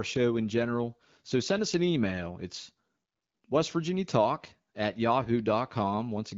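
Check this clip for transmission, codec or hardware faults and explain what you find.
No transmission, codec or hardware faults can be heard in this speech clip. It comes through the AMR wideband (HD Voice) codec at 12.65 kbit/s, where the speech stays clear and the band above 6.4 kHz is filled with shaped noise as the codec intends.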